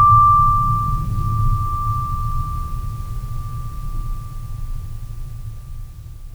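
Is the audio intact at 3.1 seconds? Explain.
Yes, the music plays through 3.1 seconds intact, with no dropout, click, distortion or other fault at that moment.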